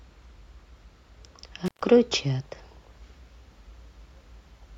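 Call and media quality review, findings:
Intermittent contact, 1.66–1.82 s: speech drops out for about 136 ms, crackle at both edges, faint hiss during the gap. Loose cable or plug momentarily opening the signal path.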